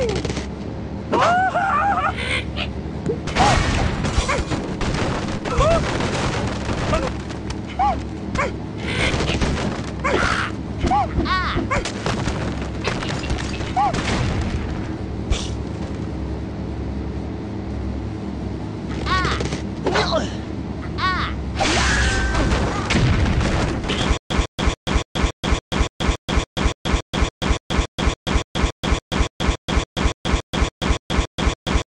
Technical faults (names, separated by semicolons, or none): stutter with silent gaps